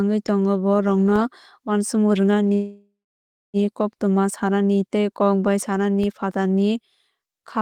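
A DC step begins at 1.16 s, where the waveform's zero line suddenly shifts away from centre and stays offset until 6.04 s, when it returns. Each of these jumps in the baseline comes through as a low thump or click, while the speech riding on top carries on with no change to its own sound. The offset is a fault in the signal's reference level.

A call audio freeze runs from 2.53 to 3.57 s, likely caused by packets being delayed in transit until the jitter buffer emptied. The receiver stretched the last sound into a fading buzz or hiss that settles into silence for about 610 ms of the roughly 1.0 s hold. The speech then resumes where it stopped, with nothing lost but now running about 1.0 s later than before.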